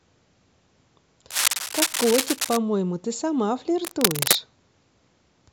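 Cable scratch noise runs from 1.30 to 2.57 s and again from 3.84 to 4.36 s. Both times, dense, uneven bursts of crackling and rustling sit over the speech at roughly the same loudness as the talker, so the scratching competes directly with it. The likely cause is a worn cable or connector being moved, its contact resistance jumping about rapidly and injecting that ragged noise into the signal while the contact is disturbed.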